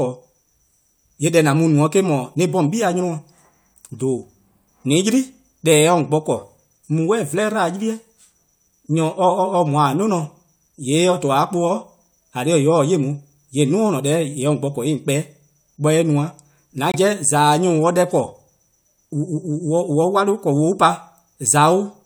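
A corrupt frame muted fault cuts into this speech recording at 16.91 s, where the sound drops abruptly into silence for about 50 ms before resuming at 16.96 s. Damaged bits in the compressed stream made the decoder reject the affected data, and the player filled the gap with silence instead of sound. The hole spans two frame lengths, which fits frames of roughly 25 ms each. Timing stays intact afterwards, so nothing drifts or shifts.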